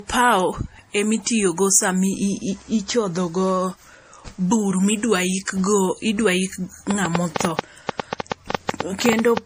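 Transcoding between lossy codecs runs throughout. The speech likely passed through a low-bitrate MP3-like stage and then WMA, leaving layered smearing and nothing above 15.3 kHz. A train of clicks runs from 6.91 to 9.38 s: about twenty similar pops at an uneven pace, about eight per second, standing out roughly 20 dB above the speech, likely from interference or a faulty connection.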